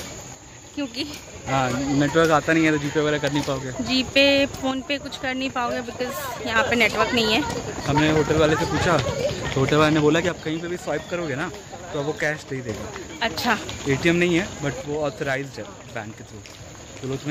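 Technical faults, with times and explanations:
0.35–1.47 s, 4.71–6.56 s, 10.29–12.69 s and 14.81 s to the end: one channel drops out. The level falls abruptly by about 6 dB and, in the first three, springs back just as sharply, with no fade, which points to one stereo side likely vanishing before the mono sum.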